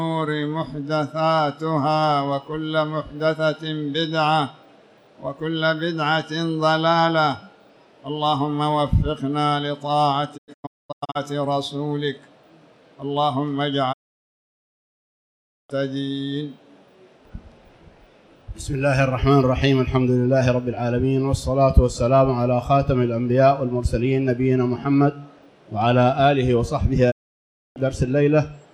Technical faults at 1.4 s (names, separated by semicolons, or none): none